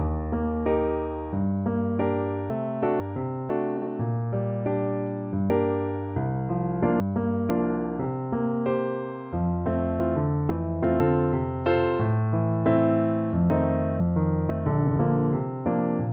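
A jumbled lurch at 2.5 to 3.5 s comes from chunks out of order. Two 500 ms chunks play swapped, because one chunk arrived a chunk late and was played after the one that should follow it. Nothing goes missing, but there are hard joins and the flow doubles back on itself.

At 3.77 to 3.87 s, a brief garbled flutter marks frames out of order. Two neighbouring runs of two frames each, 46.4 ms per run, were decoded in swapped order, so the halves of that short stretch trade places without any loss of time.

From 5.5 to 7.5 s the chunk fault returns in a longer form. One 500 ms chunk turns up three chunks late, so the disorder stretches over two seconds, with hard joins where the pieces meet.

A tiny flutter at 8.00 to 8.05 s is the frame fault again, this time with single 23.2 ms frames exchanged.

The one-chunk-late pattern repeats at 10.0 to 11.0 s and 13.5 to 14.5 s, each heard as a jumbled, reordered second. 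A final swapped-frame flutter at 14.87 to 14.96 s again exchanges runs of two frames, 46.4 ms each.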